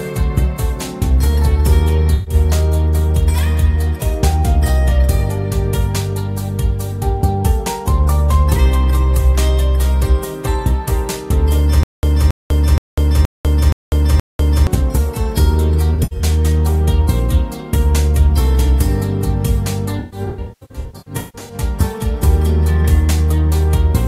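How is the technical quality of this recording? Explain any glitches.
The recording has two kinds of glitch: decoder concealment of lost data and a stalling playback stutter.

AAC frame loss with concealment: at 2.14 to 2.34 s, about 128 ms of AAC frames went missing. At 15.94 to 16.23 s, 149 ms were lost, scattered over 256 ms. At 19.99 to 21.54 s, 896 ms were lost, scattered over about 1.5 s, with runs up to roughly 150 ms. The decoder rebuilt each gap from the last good spectrum, so these stretches come out as smeared, noisy or phasey patches.

Stutter with silent gaps: from 11.83 to 14.67 s, playback likely stalled and retried. A 275 ms fragment repeats six times, every 473 ms, separated by 197 ms of silence. The audio that belonged in that stretch is gone.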